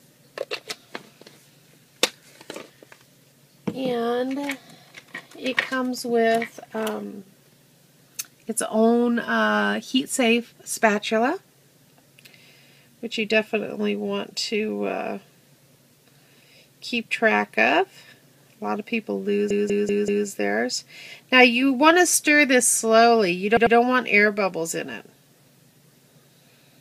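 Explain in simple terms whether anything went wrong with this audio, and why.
Repeated frames make the audio stutter. Stored chunks were played again. At 19.50 s, 192 ms repeats four extra times. At 23.57 s, 96 ms repeats twice.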